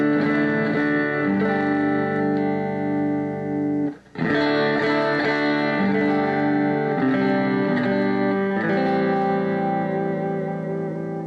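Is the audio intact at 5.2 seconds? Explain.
Yes, the audio is intact at 5.2 seconds, with no fault of any kind at that moment.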